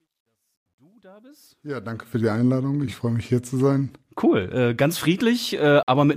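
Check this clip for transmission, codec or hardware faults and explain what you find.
Two faults turn up here, one at each end.

From 0.00 to 2.25 s there's truncation distortion on the fade-in. The gain stage drops low bits without dither, consistent with a 12-bit path, so the quietest stretch, 0.00 to 1.12 s, turns gritty.

At 5.83 s the audio drops to silence for about 49 ms and then carries on. That's likely a Bluetooth stall, where interference delays packets, the headphone buffer runs dry, and playback pauses until the missing data arrives.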